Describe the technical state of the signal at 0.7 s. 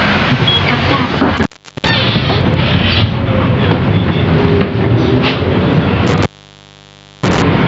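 At 0.7 s the sound is caught in gain pumping, which runs through the whole clip. The likely cause is input gain set far too high, with a fast limiter or compressor clamping down each time a loud sound arrives and releasing in the gaps. The gain swings by around 15 dB, so levels are squashed together. The call path also leaves nothing above 8 kHz.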